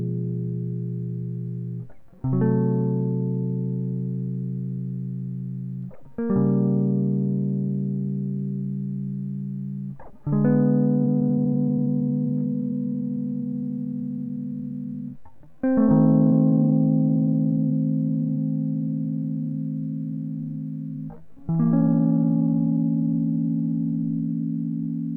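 From 10.94 s to 24.92 s, software likely stretched the music to about 0.69 times its speed, giving a time-stretched section that drags at unchanged pitch.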